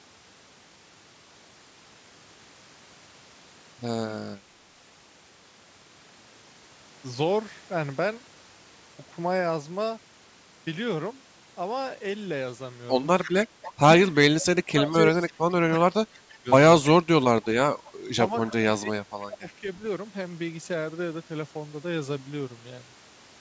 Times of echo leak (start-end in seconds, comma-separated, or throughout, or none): 13.24-13.72, 16.83-16.87, 17.85-18.52, 19.47-19.53